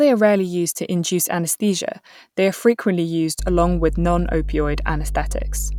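A speech clip with mains hum arriving at 3.39 s, right after "frequently used", and continuing to the end. A steady 50 Hz tone with a few low harmonics sits nearly as loud as the speech, pointing to a ground loop or nearby transformer coupling the power line into the signal. On a spectrogram it appears as bright horizontal lines at 50 Hz and its multiples; the waveform shows a regular low-frequency ripple under the speech.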